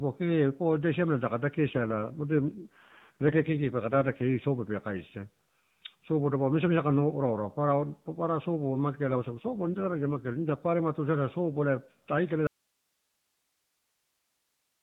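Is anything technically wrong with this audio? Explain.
Yes. The speech runs through an AMR narrowband mobile codec at 12.2 kbps, which itself does only light damage, but two kinds of fault are audible.

AMR rate drop, from 1.70 to 4.45 s, just after "pua ida siamela taka", and from 9.04 to 10.61 s, between "papara sopo" and "tuisada sopo ela tarukala". In both stretches the codec falls from 12.2 to 5.9 kbps, as a weak radio link would force. The freed bits go to error protection, so fewer pulses describe each frame. The voice turns rougher and more synthetic, then recovers when the rate returns. Unlike a dropout, nothing goes silent and the 4 kHz band stays intact. Only the texture degrades.

Audio dropout to a faint residue, from 12.47 s to the end, right after "tuisada sopo ela tarukala". The speech cuts off abruptly and only hiss remains, roughly 50 dB below the speech level. The likely cause is that the incoming signal was lost while the path after the break stayed live, so its noise floor carries on. 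The hard edge and the surviving hiss set it apart from a natural pause or a fade-out.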